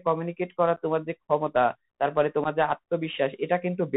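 Throughout, the speech runs through a Bluetooth CVSD headset codec, a one-bit delta coder consistent with a 64 kbps link. Nothing above 4 kHz survives, sibilants turn scratchy, and a granular hiss sits underneath. At 0.76 s, and again from 2.44 to 2.47 s, unconcealed Bluetooth headset packet loss drops a few voice packets with nothing filled in. This leaves abrupt 11.2 ms and 7.5 ms holes, and the speech resumes briefly quieter.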